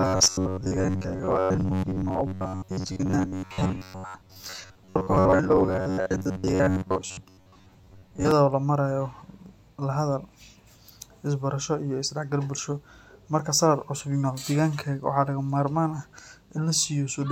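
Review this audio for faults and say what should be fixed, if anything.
From 0.01 to 8.31 s the speech has a robotic sound from repeated short buffers: a rigid, metallic buzz at 93.8 Hz that follows the original only roughly. The likely cause is audio arriving too seldom, so a segment of about 10.7 ms (one over 93.8 Hz) is repeated for most of that span while real audio is skipped. To prevent it, give the capture and playback path enough buffering and processing headroom that new audio always arrives before the buffer runs dry.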